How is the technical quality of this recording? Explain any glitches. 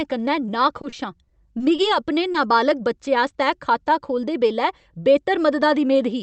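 The recording has one glitch, a burst of repeated packet loss, heard through a call codec whose top end stops near 8 kHz.

Repeated packet loss (robotic sound) runs from 0.81 to 2.36 s. Seven separate gaps hit that stretch, none longer than 30 ms, with about 120 ms of audio missing in total. Each hole was patched by extending the preceding sound, about 140 ms of fill in all, roughly 9% of the span. The quick succession of patches makes the speech choppy, with small pieces dropped out.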